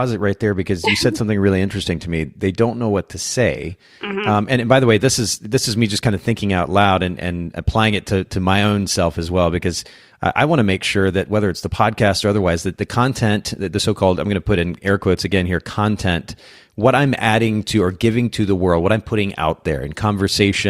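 Hard clipping appears at 6.79 to 6.85 s, at 10.39 s, and from 16.86 to 17.29 s. Peaks exceed what a stage can pass, by about 1 dB, and are cut flat. The flattened tops add high harmonics, heard as brief crackle on the speech peaks.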